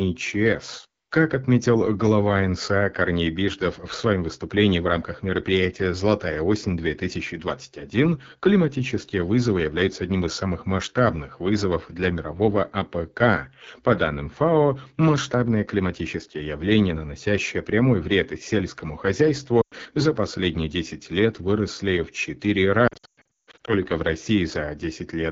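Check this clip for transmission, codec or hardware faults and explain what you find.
Two faults are audible: low-rate wideband codec damage throughout, and two bursts of lost speech frames.

AMR wideband (HD Voice) codec, whole clip. The speech sounds rough and raspy from start to finish. AMR-WB models the vocal tract and drives it with pulses below 6.4 kHz, then fills 6.4 to 7 kHz with shaped noise. At a low rate the pulse coding is too coarse to carry the voice cleanly. The damage is plainly audible and fits one of the two lowest modes, around 8.85 kbit/s.

Lost AMR speech frames, twice. The first is at 19.62 to 19.74 s, just before "за последние". The second is at 22.87 to 23.74 s. When frames fail their checksum, the decoder reuses the last good pitch and vocal tract settings and lowers the gain. The first gap is about 100 ms, which fits five 20 ms frames. It gives a short warble and fade. 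The second is patchy. About 520 ms is lost across roughly 800 ms, and the longest run is 160 ms. The sound dips out repeatedly and returns weak or rough.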